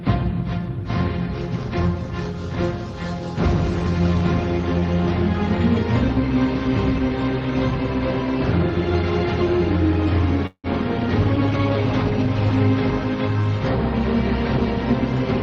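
A likely packet delay emptied the jitter buffer at 10.47 s, a call audio freeze: the last sound fades into a brief fill with 70 ms of silence, then resumes at 10.67 s, now 172 ms behind, with nothing lost. At 11.25 s a call bitrate drop cut the encoder from 32 to 18 kbps for about 1.4 s, making the audio coarser until 12.68 s.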